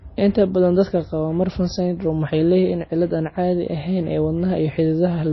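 Throughout, the speech carries plainly audible damage that is likely MP3 compression: nothing survives above 5.8 kHz, and weak detail flickers in and out, giving a watery swirl that fits a bitrate near 24 kbps. A simple low-pass filter would dull the top without that swirling.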